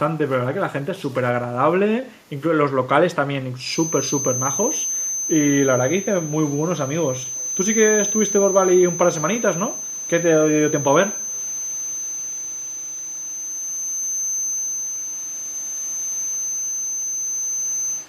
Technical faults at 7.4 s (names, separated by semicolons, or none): echo leak